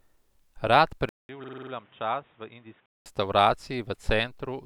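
At 1.09 s the speech turns dull and boxy after a gap of about 200 ms, consistent with an input switched to a poorer device, likely a change of microphone or a headset's call profile. Nothing is present above 3.8 kHz, the level falls by roughly 10 dB, and a new noise floor sits around 30 dB below the speech. The original, fuller sound returns at 3.06 s.

From 1.44 s to 1.72 s, inside that degraded stretch, a system hang loop occurs. A 46.44 ms piece of audio repeats six times at 21.5 Hz, which fits a 2048-sample ring buffer being cycled while the computer or driver stalled. At that repeat rate the result is a rapid, rough stutter bordering on a buzz, with the same fragment heard identically each time.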